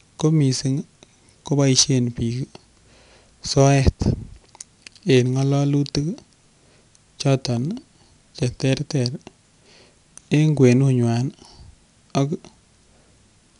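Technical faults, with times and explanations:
Throughout, 4-bit ADPCM compression: each speech sample is coded as a coarse 4-bit step from a prediction, so a gritty hiss rides every loud syllable and sharp onsets distort where the step size lags. A spectrogram shows broadband noise tracking the speech level and nothing above 10.6 kHz, which points to a sample rate near 22 kHz.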